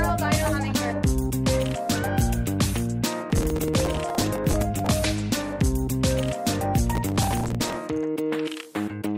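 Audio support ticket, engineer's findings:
Processor overload crackle, 3.30 to 4.91 s and 6.95 to 7.77 s. Gritty tearing crackle over the sound, stopping once the load clears. Probable component: audio processing thread or DSP missing its real-time deadlines. Mechanism: dozens of repeated buffer underruns, each a few milliseconds long, fitting a very small buffer. Each missed slot replays stale audio with hard edges, and the rapid run of these splices produces the crackle. Recommend larger buffer or reduced CPU load.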